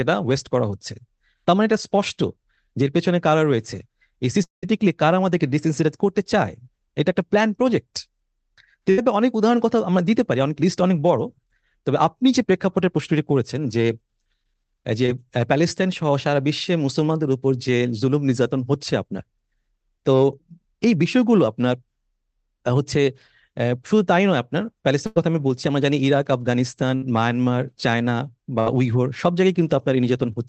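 At 4.43 s the speech breaks off for about 200 ms. The last sound is carried on as a fading buzz and then left as near-silence for about 140 ms before the speech resumes at 4.64 s, with that stretch gone. This is likely a long network dropout.

At 8.90 to 8.99 s there is a burst of packet loss. About 80 ms never arrived, and the receiver stretched the preceding sound across the gap, turning it down as it went, so it comes out as a short held buzz or fading hiss before the speech picks up further on.

At 15.06 to 15.10 s, short concealed packet loss removes about 20 ms. The decoder patches it by extending the last sound and blending back in, which gives a brief smear or wobble.

Three more bursts of packet loss sit close together late in the clip: 25.06 to 25.18 s (about 100 ms missing), 26.96 to 27.04 s (about 60 ms) and 28.60 to 28.68 s (about 60 ms). Each is heard as the same held, decaying fill followed by a jump in the speech. 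All of this passes through an Opus call path band-limited at 8 kHz.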